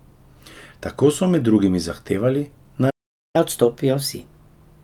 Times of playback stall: 2.90-3.36

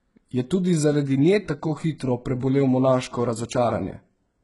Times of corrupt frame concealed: none

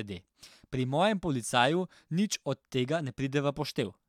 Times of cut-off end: none

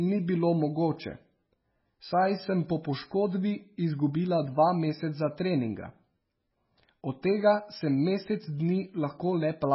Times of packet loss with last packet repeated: none

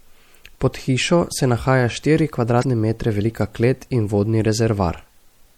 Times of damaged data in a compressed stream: 2.60-2.64

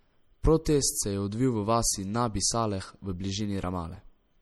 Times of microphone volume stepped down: none

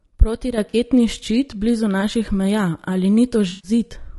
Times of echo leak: none

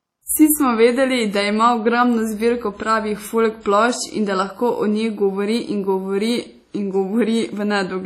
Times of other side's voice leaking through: none

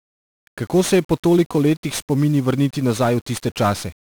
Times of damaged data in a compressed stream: none

